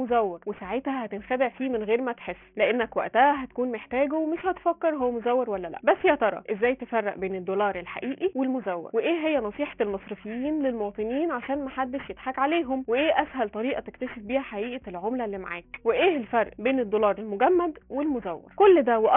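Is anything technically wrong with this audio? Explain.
Yes. Aliasing runs through the whole clip, from start to finish. The sound appears to have been brought down to a sample rate of around 6 kHz without an anti-aliasing filter first, so everything above the 3 kHz fold point is mirrored back below it onto wrong, unrelated frequencies. Those folded components sit roughly 20 dB under the wanted sound, giving bright, sharp content a gritty, metallic edge, while the spectrum stays packed right up to 3 kHz.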